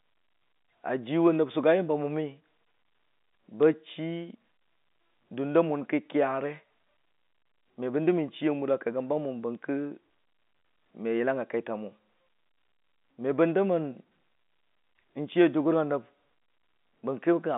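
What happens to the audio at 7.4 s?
Nothing goes wrong at 7.4 s: the speech carries on intact through that moment, with the narrow telephone band of G.711 coding, nothing above about 3.8 kHz, as its normal character.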